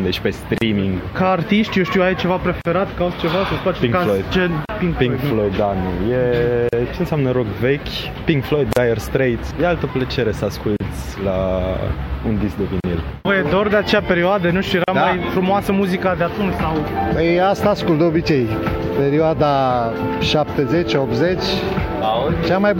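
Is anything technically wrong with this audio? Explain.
Yes. There's a recurring gap at a join of encoded pieces, a short silence punched into otherwise continuous sound at 0.58, 2.61, 4.65, 6.69, 8.73, 10.76, 12.80 and 14.84 s, so every 2.0 s. Each dropout lasts about 35 to 38 ms, with edges smeared by the codec, and the audio resumes right where it left off. The 2-second chunks look like they were encoded separately and butted together without trimming the encoder's leading delay and final-frame padding.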